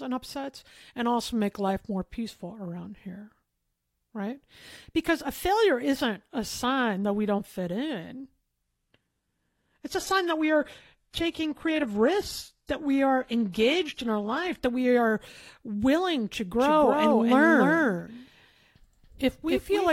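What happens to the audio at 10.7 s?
At 10.7 s the speech is in an adaptive stream at a lower bitrate, from 8.62 s (after "we don't fit in") to 14.62 s. Quality drops abruptly, losing everything above 12.3 kHz, with a synthetic top end that fits a low-rate HE-AAC version. Unlike a dropout, the sound never stops.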